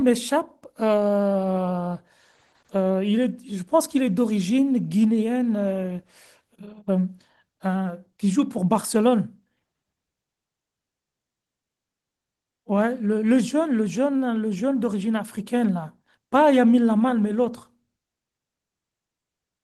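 No technical faults turn up in the speech, which carries only the light coding character of Opus voice compression in its full-band hybrid mode, at a rate that sounds like roughly 20 kbps.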